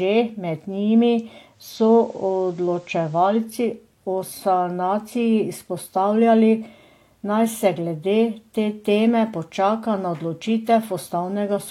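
From 1.47 to 3.50 s, faint hiss appears and level shifts about 1 dB: digital radio blending to analogue FM, with 317 ms cross-fades.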